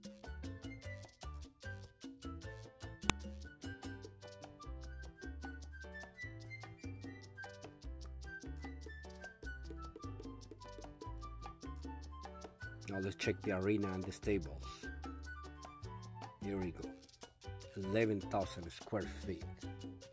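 At 3.10 s there is a single sharp, loud click. It is a file header played as audio. A second piece of the file was joined on here without its header being stripped. Those few dozen bytes of metadata were read as sample values. They don't follow the waveform around them, so they land as a near-instant jolt. The snap lasts only a couple of milliseconds and stands well above the surrounding sound.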